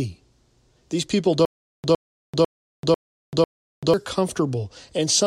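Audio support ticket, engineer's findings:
Playback stall, likely buffer underrun in player or stream. Stutter with silent gaps, 1.45–3.94 s: 110 ms speech burst repeats 5 times, 390 ms digital silence between, every 0.5 s. Intervening audio lost.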